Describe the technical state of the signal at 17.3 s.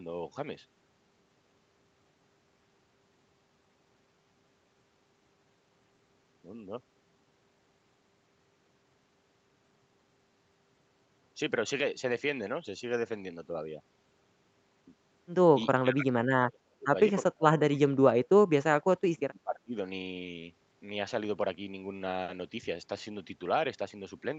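At 17.3 s the speech falls within a stretch of speech suppressed in double talk, from 17.22 to 18.18 s. It sinks in fragments by around 35 dB, likely because an echo canceller ducked the talker while the far side spoke. Unlike a packet-loss dropout, it breaks unevenly rather than vanishing cleanly.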